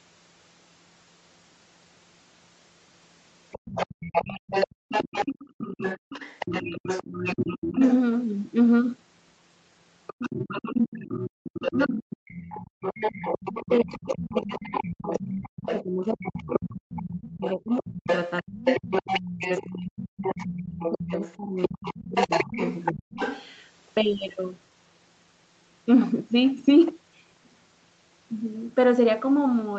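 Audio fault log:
3.51–7.94 s, 10.07–19.65 s and 20.22–23.51 s: other side's voice leaking through. A second voice runs under the talker's, only about 5 dB quieter. This is likely loudspeaker playback that the echo canceller failed to fully remove from the microphone pickup.
4.75–4.89 s and 11.3–11.43 s: background gated by the echo canceller. For about 150 ms each time, the room sound falls away by about 40 dB and then returns. The canceller clamped the microphone hard while the loudspeaker was active, then released it.
7.75–7.83 s, 11.73–12.49 s and 13.63–23.17 s: speech suppressed in double talk. The talker's voice dips briefly by about 10 dB at first, then drops deeply by roughly 35–40 dB across about 0.7 s and then about 7 seconds of a 9.5-second stretch, cutting out in pieces. The likely cause is the canceller mistaking overlapping speech for echo and pulling both down.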